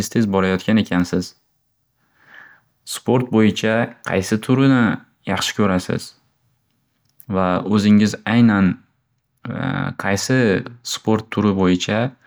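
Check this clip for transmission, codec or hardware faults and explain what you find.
No transmission, codec or hardware faults are audible anywhere in the speech.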